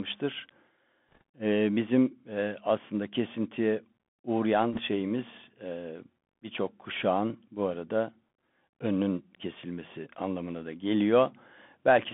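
The whole thing has gone through the Bluetooth CVSD headset codec: sound squeezed into a 200 to 3400 Hz band, plainly audible scratchy, granular hiss from the one-bit up/down steps. Bit errors on the Bluetooth voice link hit from 1.12 to 1.21 s and again from 4.73 to 4.80 s, roughly 1% then 2% flipped bits, giving rushing crackle that rides the level.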